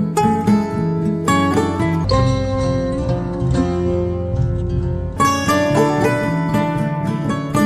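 From 2.04 s to 5.16 s a section at the wrong speed plays at 0.598 times its proper rate, so the sound drags and drops close to ten semitones, deep and sluggish, then snaps back. The likely cause is a playback or edit clock mismatched to the recording. On a spectrogram every harmonic and formant band shifts downward and stretches horizontally across that span; the waveform shows visibly longer cycles and slower amplitude changes.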